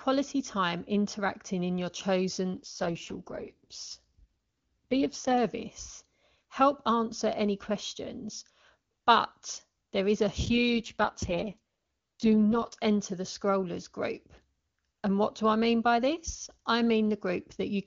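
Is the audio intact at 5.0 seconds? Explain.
No. At 5.0 s an AMR rate drop is underway, from 2.54 to 5.38 s. The speech turns rough, raspy and synthetic, which fits the network forcing AMR-WB down from 23.85 to 6.6 kbit/s. Unlike a bandwidth cut or dropout, the band stays full and there is no gap.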